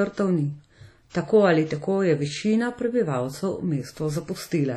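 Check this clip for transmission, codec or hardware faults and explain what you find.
Two codec faults are audible in this speech clip.

WMA compression, throughout: the ringing, washy quality with hiss that swells and fades with the voice is likely from a transform codec at a low bitrate, roughly 32 kbps. It zeroes weak spectral lines and leaves nothing above 19.8 kHz.

Pre-echo, 1.10 to 1.15 s, just before "tako ali tako je": the codec spread its block noise about 48 ms ahead of a sharp onset, so a brief hiss precedes it and the attack sounds smeared.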